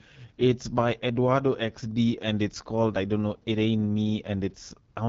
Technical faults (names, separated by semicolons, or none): AMR wideband (HD Voice) codec